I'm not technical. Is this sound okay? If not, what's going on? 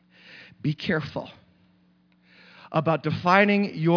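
Yes, this one's fine: nothing in the recording stands out as a technical problem, so there's nothing to worry about here.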